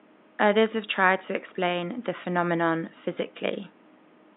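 No technical faults in the speech; the only background is room noise sitting about 31 dB below the voice, which belongs to the recording rather than the system.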